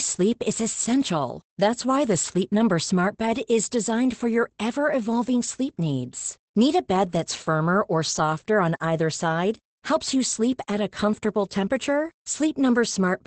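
Opus voice compression runs throughout, cutting everything above 8.6 kHz. Unlike plain filtering, coarse coding leaves the speech hoarse and robotic, which fits a 12 kbps SILK stream.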